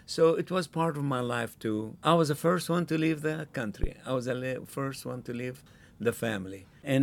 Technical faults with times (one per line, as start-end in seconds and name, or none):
3.84-3.90 phantom power thump